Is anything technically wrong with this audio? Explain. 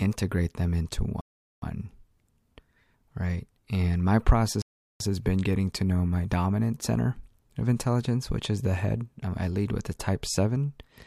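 Yes, there are two rebuffering stalls. At 1.21 to 1.62 s, after "them into", and at 4.62 to 5.00 s, before "has been getting to", playback runs dry and halts. It adds 0.41 s and 0.38 s of silence, then resumes seamlessly, showing as flat waveform gaps and blank spectrogram columns.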